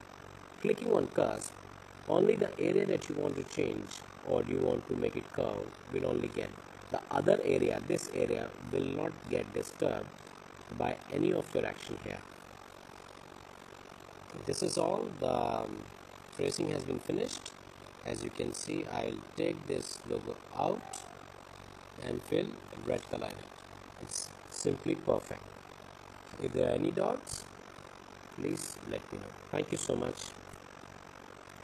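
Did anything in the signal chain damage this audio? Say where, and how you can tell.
Yes. The damage is overlap-add ripple from a frame-based processing stage, and it runs through the whole clip. The level pulses at around 50 Hz with a swing of about 60 dB, which sounds like a harsh, fast flutter. The windowed frames were overlapped in a way that doesn't sum to constant gain, so each frame boundary dips deeply. A waveform shows a comb of regular notches in the envelope, and a spectrogram shows evenly spaced vertical stripes across all frequencies.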